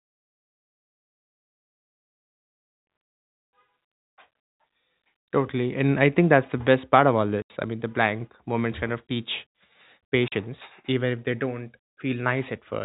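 Packet loss filled with silence cuts this telephone-band speech at 7.42 to 7.50 s and again at 10.28 to 10.32 s. Chunks of audio never arrived, and the receiver played dead silence in their place. The 80 ms gap fits four 20 ms packets and the 40 ms gap fits two. Each hole begins and ends abruptly, so the waveform drops to silence and back. The G.711 coding's 4 kHz ceiling is audible throughout.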